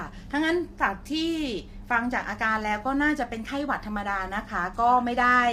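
Throughout the speech, the voice sounds rough and grainy, likely from low-delay AAC compression (AAC-ELD) at a bitrate that points to around 32 kbps. Coarse coding at this low bitrate lets noise into the pitch harmonics, so a spectrogram shows the harmonic lines with noise filling the gaps between them.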